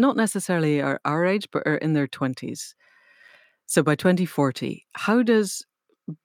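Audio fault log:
3.23–3.52 s, processor overload crackle: the processor fell behind and missed a run of buffer deadlines, which sounds like roughly ten buffers of about 5 ms each. Every miss became a hard-edged gap of silence, so the speech breaks into gritty crackle until the load passes.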